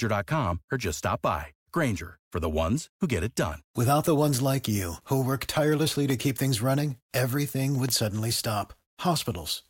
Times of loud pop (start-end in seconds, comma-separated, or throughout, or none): 6.10-6.12, 7.89-7.91